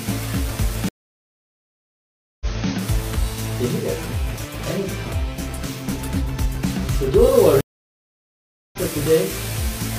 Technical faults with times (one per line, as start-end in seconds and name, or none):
0.89-2.69 stream reconnect
7.61-8.79 stream reconnect